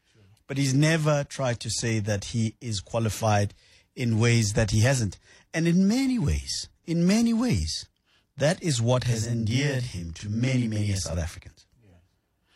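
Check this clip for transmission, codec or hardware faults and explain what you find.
One fault, a channel delay (doubling): from 9.03 to 11.14 s, one channel runs 40 ms late before mono summing, so the speech gains an equal-level doubled slap.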